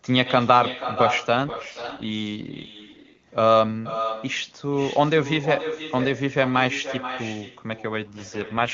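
Echo with no canceller runs through the whole clip. Every phrase returns about half a second later, roughly 10 dB quieter. The copy sounds thinner. A far-end loudspeaker is feeding its microphone, and nothing removes the returning signal.

An AMR rate drop hits from 1.36 to 3.22 s, and again from 8.04 s to the end. The band stays the same and nothing cuts out. The speech turns rough and synthetic, which fits a fall from 23.85 to 6.6 kbit/s.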